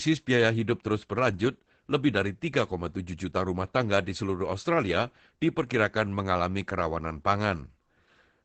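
Throughout, Opus voice compression leaves speech muffled and hoarse; the spectrogram is empty above 8.7 kHz, which fits a 12 kbps SILK stream.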